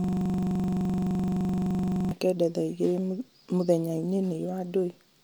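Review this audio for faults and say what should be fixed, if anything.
A system hang loop is already under way when the clip begins and runs until 2.11 s. The driver stalled while the hardware kept replaying the same 42.67 ms slice of its ring buffer, which fits a 2048-sample buffer. That slice repeats roughly fifty times at 23.4 Hz, giving a rapid machine-gun stutter. On a waveform it shows as identical repeating blocks. A spectrogram shows evenly spaced vertical stripes and a harmonic comb at multiples of 23.4 Hz. Prevent it by fixing the driver or system stall, and mute output whenever the buffer stops being refilled.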